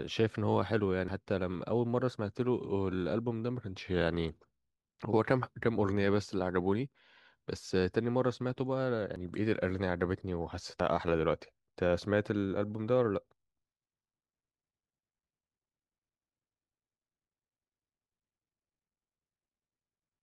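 At 1.08 s, 9.16 s and 10.8 s the speech jumps forward abruptly, each time with no gap of silence. Each jump skips roughly 40 ms of material, with the audio on either side butted directly together. The likely cause is a dropped buffer (overrun): the capturing program fell behind and the hardware overwrote a block of samples before it was collected, so that stretch is simply missing from the recording.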